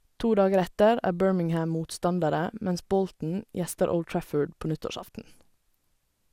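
Throughout the speech, the sound is swirly, smeared and hollow, with blurred consonant attacks and nothing above 17.3 kHz. This is generation loss, likely from roughly seven successive lossy encodes, consistent with MP2 at 128 kbit/s, each pass adding fresh quantisation noise.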